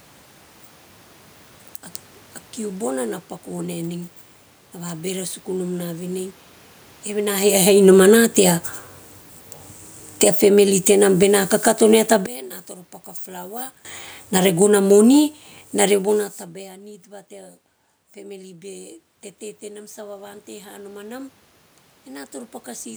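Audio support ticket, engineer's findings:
Automatic gain falling, 7.32 to 11.95 s, about 12 dB down; again 14.21 to 16.33 s, about 6 dB, settling just before "tabae a nid ta". AGC judged input too loud or its noise too strong and ramped its gain down. Room noise sinks together with speech. Waveform: envelope tapering smoothly over seconds. Spectrogram: whole band, including noise floor, darkening uniformly. Level changes near 7 s and 16 s are the talker moving, not the system.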